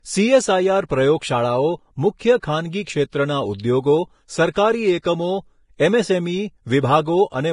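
Heavy lossy coding, likely Vorbis compression at a bitrate near 29 kbps, runs through the whole speech clip. Nothing survives above 10.5 kHz, and the coarsely quantised treble has turned into grainy hiss, leaving tones rough and consonant edges blurred.

Pre-echo occurs where the codec's block-wide quantisation noise leaks ahead of sharp onsets. It falls at 2.19–2.21 s, 2.40–2.43 s, 4.53–4.56 s and 5.02–5.04 s. Each time, a short hiss of 20 to 30 ms precedes the attack, which lands soft and smeared.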